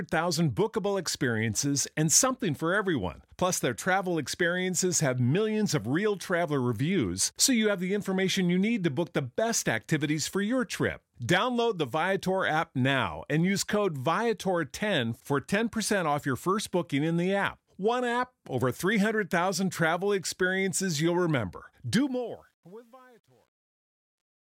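From 21.98 s, after "travel experiences you'll remember", the fade passes through a digital gain stage that discards low bits without dither, which fits a 10-bit stage. This truncation distortion on a fade reduces the waveform to coarse steps, so from 22.56 s to the end the tail sounds gritty.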